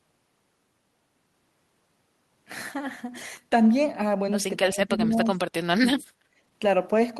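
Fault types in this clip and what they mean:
speech suppressed in double talk: The talker gets pulled down twice, from 4.72 to 5.36 s and again from 5.8 to 6.03 s, with the level dropping by roughly 15 dB at the deepest point. Altogether about half a second of the talker is affected. This is likely the echo canceller getting confused while both sides talk at once: it can't separate the local talker from the loudspeaker echo, so it turns everything down together.
background gated by the echo canceller: At 6.32 to 6.4 s the room sound behind the talker briefly ducks, by about 14 dB, for roughly 70 ms, then comes straight back. That's the echo canceller clamping the microphone hard while the loudspeaker is active and then releasing it. Because the gate takes the ambient bed with it, you hear a short hole in the background rather than a change in the talker.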